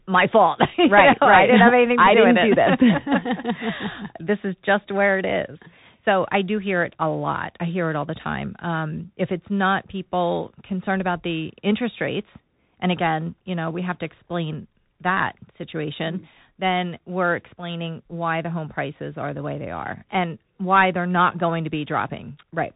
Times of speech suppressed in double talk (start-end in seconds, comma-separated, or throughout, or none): none